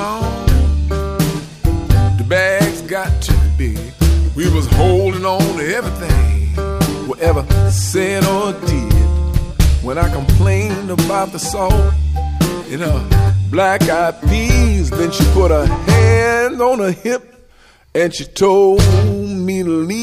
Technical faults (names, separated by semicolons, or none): none